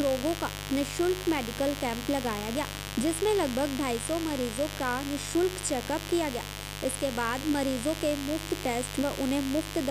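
A steady, raspy mains buzz runs through the whole recording, sitting only about 10 dB below the sound. Its 50 Hz switching spikes spread harmonics into the kilohertz range.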